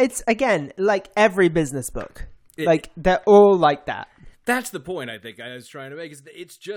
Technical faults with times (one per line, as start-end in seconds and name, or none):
4.25-5.76 zipper noise